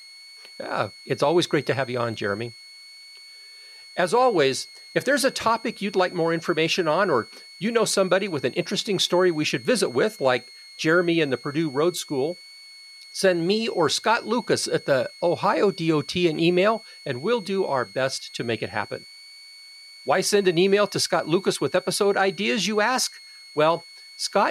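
From start to finish, a thin high whistle sits under the speech. It is a switching supply whistle. A switching power supply is running in an audible burst mode, or beating against a second supply. The tone wanders between about 2.15 and 2.23 kHz as the load shifts. It stays roughly 25 dB below the speech, so it is quiet but steady.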